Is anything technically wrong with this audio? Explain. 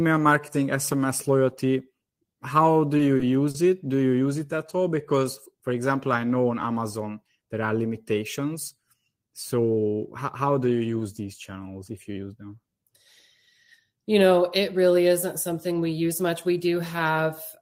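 Yes. Around 2.97, 3.17 (after "do you") and 3.51 s (again after "do you"), sound briefly freezes and holds, for 20, 20 and 30 ms: short stalls from late packets, where an empty jitter buffer stretched the last sound until the packet arrived.

From 4.77 to 5.25 s, between "you use it at" and "for example I know", the speech drags at the same pitch, running at 93% speed. This is a jitter buffer slow-down: repeated pitch periods added 40 ms to rebuild the buffer's reserve.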